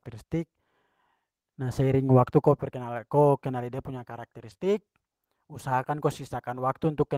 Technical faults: lost packet rebuilt from error correction; short concealed packet loss

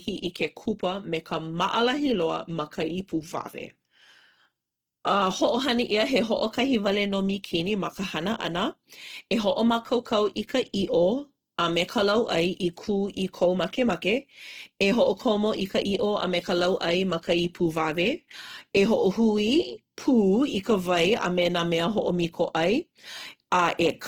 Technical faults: Opus compression

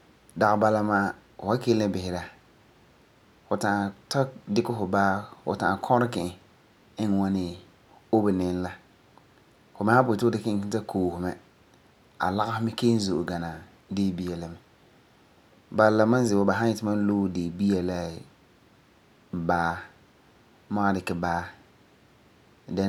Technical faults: none

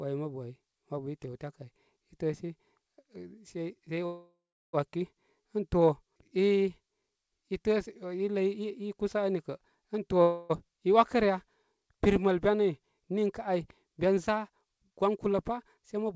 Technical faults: call audio freeze; jitter buffer speed-up

